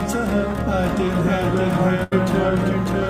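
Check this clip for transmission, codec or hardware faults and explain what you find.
Two faults are audible.

A doubled audio track runs throughout: a second, equally loud full-band copy trails by roughly 0.7 s, likely from a duplicate capture path. Unlike room echo, it has no decay or tonal colouring.

A burst of packet loss occurs at 2.03–2.13 s: about 80 ms of audio is replaced by the last sound stretched and fading, then playback resumes further on. Unlike a plain dropout, this gap is filled rather than silent.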